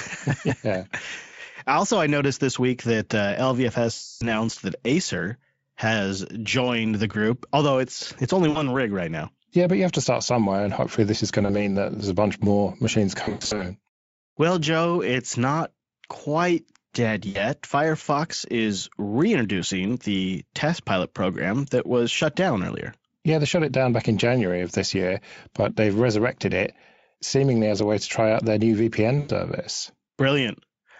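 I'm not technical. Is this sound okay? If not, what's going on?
No. The speech has short dropouts caused by VoIP packet loss concealed by the speech codec. Bits of the call went missing in transit. The decoder filled each gap by stretching the last sound it had, so you hear a buzzy or hissy smear that fades instead of clear speech. It happens at 3.93 to 4.26 s, 8.49 to 8.62 s, 11.45 to 11.56 s, 13.23 to 13.63 s (several small gaps), 17.29 to 17.43 s and 29.19 to 29.31 s. The first is the longest.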